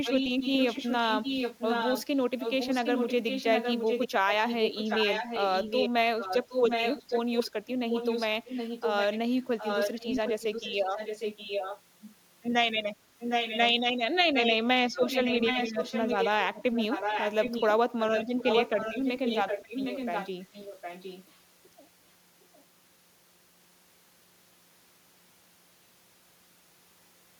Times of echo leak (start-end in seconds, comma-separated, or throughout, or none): 0.04-2.05, 2.38-12.07, 13.19-13.59, 14.34-14.56, 14.93-17.68, 17.99-21.25